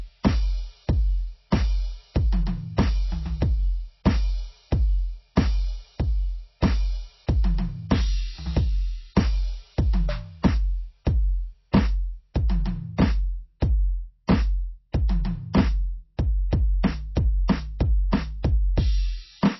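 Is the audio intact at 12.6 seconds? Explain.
No. At 12.6 seconds, as throughout the whole music clip, the signal bears the marks of heavy encoding, most likely MP3 compression at a very low bitrate, which fits something around 24 kbps. Starved of bits, the encoder discards everything above 5.8 kHz and drops quieter frequency lines that flicker in and out between frames. The result is plainly audible: dull, muffled treble, a watery swirling texture, metallic chirps on bright sounds and smeared attacks.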